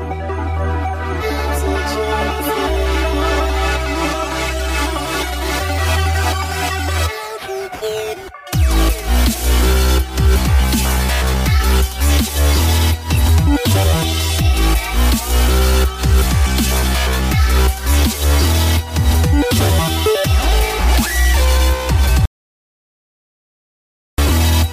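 An audio dropout to silence hits from 22.25 to 24.18 s, nearly two seconds of silence with no room tone, likely the input link briefly disconnecting.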